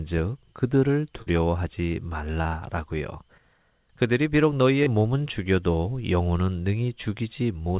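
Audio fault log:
1.22 to 4.87 s, short concealed packet loss, at 1.22–1.27 s, 2.42–2.45 s and 4.83–4.87 s: in each case a few tens of milliseconds of the call (about 40, 20 and 30 ms) arrived too late for the decoder. The receiver filled each gap by extending the preceding sound, pitch-driven if voiced and as shaped noise if not, then crossfaded back. Through the narrowband call sound, capped at 4 kHz, each patch registers as a brief smear or wobble where a short consonant may drop out.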